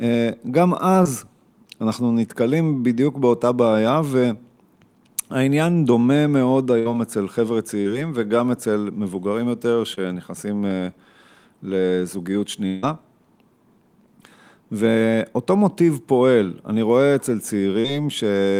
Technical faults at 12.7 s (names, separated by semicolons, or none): long network dropout